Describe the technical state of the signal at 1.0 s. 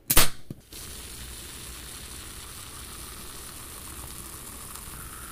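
At 1.0 s the signal is intact, with no dropout, distortion, glitch or other fault audible in the sound at that moment.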